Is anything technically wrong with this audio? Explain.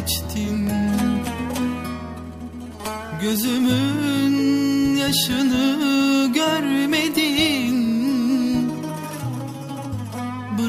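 Yes. At 0.67 s there is a block of digital silence. The audio drops to zero for about 1.6 ms and then resumes. Neither edge has a fade, so the waveform jumps straight to zero and back. A gap this short is not heard as a hole. It comes across as a single sharp tick. The cause is samples replaced by zeros, most likely because the output buffer was not filled in time.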